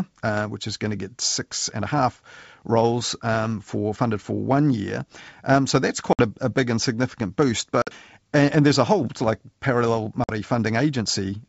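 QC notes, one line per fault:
6.13–6.22 s, 7.82–7.89 s, 10.24–10.30 s: packet loss on an ADPCM call. Gaps of 50 to 60 ms with hard edges appear as flat-line holes in the waveform and vertical blank bands on the spectrogram. After each, the speech returns slightly distorted while the decoder's predictor and step size resynchronise.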